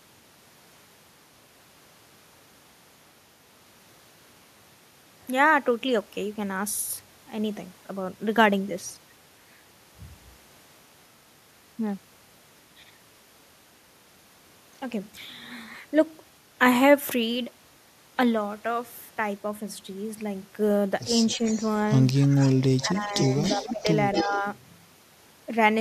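In the last few seconds of this speech clip, the talker's level dips in short pieces while a faint, delayed copy of the speech rides underneath. The dips come at 21.28–21.46 s, 22.27–22.54 s, 22.83–23.34 s, 23.57–23.89 s and 24.24–24.45 s. They range from about 5 dB to about 15 dB, with the deepest at 23.57 s. This is speech suppressed in double talk, likely caused by an echo canceller that could not tell its own talker from loudspeaker echo while both sides spoke. It responded by pulling everything down. The echo appears at 21.29–21.72 s, about 20 dB below the speech, and again at 23.02–24.41 s, where it is louder, about 10 dB down. It trails the original by 276 ms and 278 ms. That steady lag points to echo leak, with the likely cause being a far-end loudspeaker feeding the microphone and the canceller failing to remove all of it.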